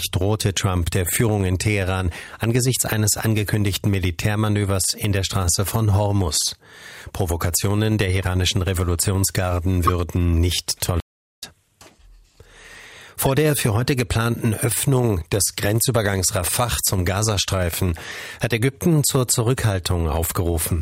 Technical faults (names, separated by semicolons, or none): corrupt frame decoded; playback stall